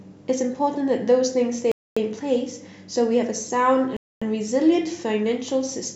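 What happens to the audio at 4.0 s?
At 3.97 s the speech stops dead and a silence of 250 ms follows, with the sound resuming at 4.22 s. This is a gap between chunks: the audio was handled in blocks of about 2 s, and empty time was inserted at the join. What separates it from a dropout is that nothing is missing. The speech picks up exactly where it broke off, so the hole adds time instead of cutting any out.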